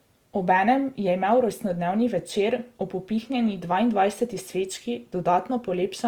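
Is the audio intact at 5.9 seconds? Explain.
No. At 5.9 s, as across the whole clip, Opus compression is plainly audible, likely from its CELT music mode at a rate fitting about 24 kbps. Short of bits, it fills bands by folding lower ones or with noise, so the speech sounds rough and grainy, though the bandwidth stays full, reaching about 20.2 kHz.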